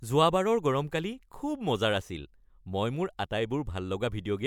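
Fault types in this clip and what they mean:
Nothing to flag here: the speech comes across without any technical faults to point out.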